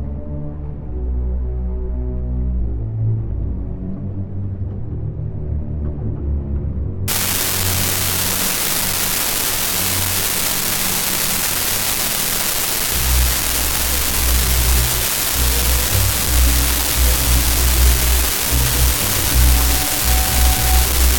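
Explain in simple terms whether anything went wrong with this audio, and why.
Yes, something goes wrong from about 7.08 seconds until the end at 21.18 seconds: an unreliable data bit. One of the wires carrying the digital audio is faulty, so one bit in the numbers comes out wrong at random moments. Each mistake makes a click of the same size, and together they form a steady fizz. Unlike clipping, which only crackles on loud moments, this fizz continues through the quiet gaps too.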